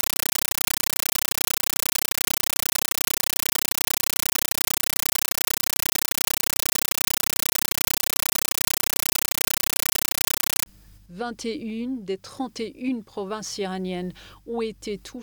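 From 0.0 to 10.66 s the sound is replaced by a compressed stream played as audio: loud, chattering static repeating 31.25 times a second, as an undecoded AC-3 frame (likely 448 kbps) is treated as samples. The waveform shows 9.33 ms noise bursts separated by flat silence, and the spectrogram shows broadband vertical stripes.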